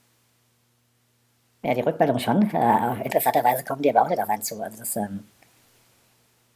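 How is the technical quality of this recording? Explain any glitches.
The recording has one fault that runs through the whole clip: a wrong sample rate. The speech plays about 1.45 times too fast and about 6.5 semitones too high, which fits audio recorded at 22 kHz but played back at 32 kHz with no conversion. Unlike a separate pitch shift or time-stretch, speed and pitch rise together by the same ratio, so the speech sounds hurried and chipmunk-like.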